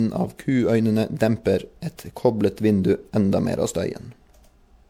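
Right through the speech there's a swirly, hollow smear with soft, blurred consonant attacks, likely generation loss from several MP3 passes at something like 96 kbit/s.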